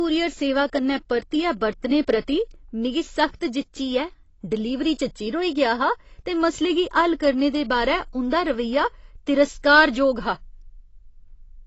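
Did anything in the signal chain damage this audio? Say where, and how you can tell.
Yes. The damage sits at the codec stage, across the whole clip. Nothing reaches above 8 kHz, so the speech sounds dull. Sibilants come out fizzy and smeared. The likely cause is AAC compression, at a rate that fits about 24 kbps, dropping the top band and quantising the rest coarsely.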